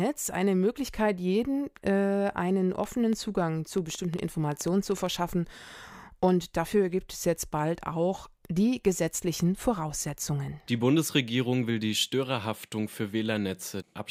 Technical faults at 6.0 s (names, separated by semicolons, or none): none